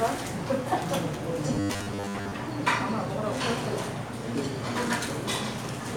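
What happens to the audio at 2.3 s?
At 2.3 s the sound is ending a stretch of rigid, metallic buzzing at 100 Hz that began at 1.54 s and stops at 2.33 s. This robotic sound from repeated short buffers is likely caused by audio arriving too seldom, so a 10 ms slice is looped over and over, with most of the real audio skipped.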